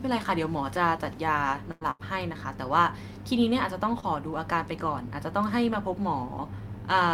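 At 1.71 s a burst of packet loss begins and runs to 1.84 s. The receiver holds the last sound for about 95 ms and fades it. Then speech resumes further on, with about 100 ms skipped.

Inside that stretch, from 1.81 to 1.83 s, is a lost packet rebuilt from error correction. A 20 ms frame is played from the low-bitrate copy carried by the following packet. It sounds rougher and noisier, not silent.

A second burst of packet loss follows at 1.91 to 2.02 s. About 82 ms is filled by a fading continuation. Roughly 80 ms of speech never arrives.

At 4.00 to 4.05 s comes a short concealed packet loss. About 20 ms went missing, and the decoder extended the preceding sound for about 22 ms before blending back. It is heard as a brief smear.

Within that span, at 4.02 to 4.04 s, another 20 ms frame is rebuilt from error correction. It is a coarser, grainier patch with no gap.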